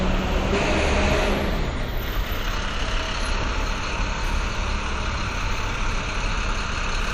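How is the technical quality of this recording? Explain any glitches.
Two brief glitches come from damaged data in a compressed stream, one at 0.52 s and one from 6.98 to 7.01 s. Corrupted bytes make the decoder misread frames and resync at the next header, giving a short chirp or blip. Each appears as a thin broadband smear on a spectrogram and a sudden discontinuity in the waveform.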